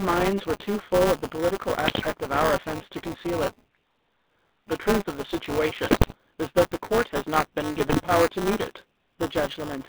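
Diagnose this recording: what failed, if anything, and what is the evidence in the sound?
Buzzy, gravelly speech confined to roughly 200 Hz to 3.7 kHz points to the codec stage: GSM full-rate coding, which fits 13 kbps, rebuilding the voice from a coarse pulse excitation.

A constant robotic rattle at 200 Hz, present only while speech plays, is buffer tearing at the driver or buffer stage. Writer and reader have slipped, so a small slice of each 5 ms period repeats slightly older audio.

Squawks and gargling at 1.86–2.07 s, 5.88–6.14 s and 7.77–8.06 s are GSM bit errors from the radio link. Corrupted filter, pitch and gain values distort the decoded frames.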